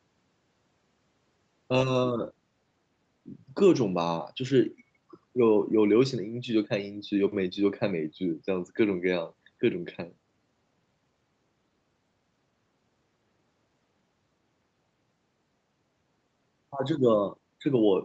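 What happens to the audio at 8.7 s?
Nothing goes wrong at 8.7 s: the speech carries straight through that moment without a dropout, glitch or other fault, with the call path's usual top end stopping around 8 kHz.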